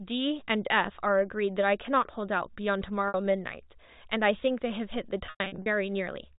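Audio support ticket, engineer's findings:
Packet loss with pitch repetition at 3.08–3.14 s (60 ms, consistent with three 20 ms packets) and 5.26–5.66 s (about 240 ms scattered, longest 100 ms run). Receiver repeats the last pitch period across the gaps: a briefly held, buzzy tone, fading toward silence on the longer run. Carried over G.711 mu-law telephone coding, band-limited below 4 kHz.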